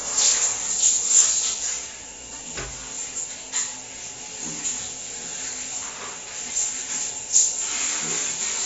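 From start to finish, nothing sounds above about 7.6 kHz. The top end is simply missing, so the sound is dull and closed in. Damage is plainly audible across the whole clip. Textures smear, and busy or hissy parts take on a warbling, fizzy grain. The likely cause is AAC compression, AAC-LC at a low bitrate, which fits roughly 24 kbps. At that rate the encoder drops the high band and starves the rest of bits.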